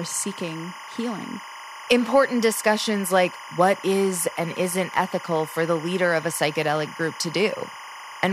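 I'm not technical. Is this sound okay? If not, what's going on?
No. A steady chirping, warbling whine runs behind the speech for the whole clip. This is timecode bleed: a sync signal at 25 frames a second, switching between pitches near 1 and 2 kHz, has leaked in from a neighbouring track or cable.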